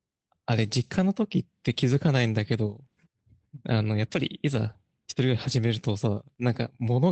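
Speech that's come through an Opus call link, with content topping out around 8 kHz. At 4.19 s there's a lost packet rebuilt from error correction: a brief rough, noisier patch of about 20 ms, which fits one dropped packet filled in from the low-bitrate backup copy carried in the next one, so there's no actual gap.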